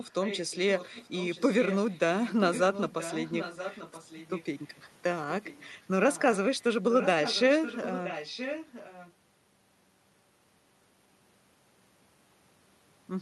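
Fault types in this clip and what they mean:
Echo leak: A delayed copy of the speech trails the original by close to one second. It is present from the start to about 4.75 s and again from 6.07 to 9.13 s, somewhat quieter than the main speech. A much fainter scrap appears between 5.44 and 5.68 s. The likely cause is a far end playing the call on a loudspeaker, with its echo canceller failing to remove what its microphone picked up and sending it back.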